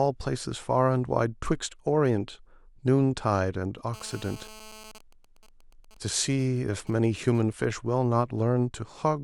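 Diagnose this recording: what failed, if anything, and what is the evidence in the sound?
GSM phone buzz, analogue stage, 3.94 to 4.92 s: a hard 217 Hz rasp about 20 dB under the speech, from a nearby phone's call bursts being rectified.

Then GSM signalling bursts from 4.95 to 7.65 s: even ticks with a longer 217 Hz buzz twice a second, a bit fainter, as that phone's user went silent mid-call.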